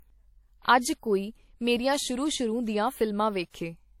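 Right through the speech there's a layered, smeary quality from what's likely transcoding between lossy codecs, pointing to a low-rate WMA pass and then MP3 on top. The second encoder spends bits re-coding the first one's artefacts, so both sets blur together, and nothing survives above 16.5 kHz.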